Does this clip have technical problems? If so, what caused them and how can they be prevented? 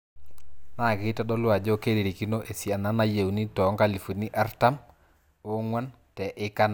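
No, nothing technical goes wrong anywhere in this speech clip, so there's no cause to track down and nothing that needs preventing.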